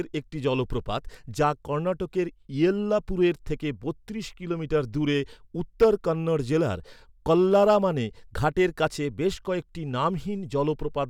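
Speech with one burst of hard clipping from 5.82 to 5.86 s, just before "কন্নড় জেলার". Peaks about 6 dB over the limit are cut flat, giving a brief crackle.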